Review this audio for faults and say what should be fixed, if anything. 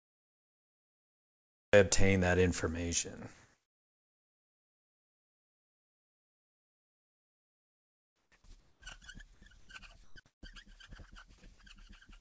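The opening 1.73 s is digital silence, and the sound enters abruptly at 1.73 s in mid-flow, with no natural attack. This cut-off start means capture or streaming began late, after the sound was already under way. Start recording a moment before the source begins.

From 3.34 to 8.32 s, and again at 8.60–8.82, 9.34–9.42, 9.60–9.68, 10.04–10.16 and 10.26–10.42 s, the background turns into a flat, featureless hiss. Its level shifts by about 1 to 4 dB, and the last patch jumps about 11 dB louder. This is comfort noise in place of the background, likely from discontinuous transmission filling pauses with synthetic noise. Disable discontinuous transmission on the sending side.

At 8.80 s the sound begins suddenly, losing its soft first moments where comfort noise sat instead. This is an onset clipped by the voice detector, likely because it reacted late to the returning sound. Lower the voice detector threshold or add hangover and look-ahead before transmission resumes.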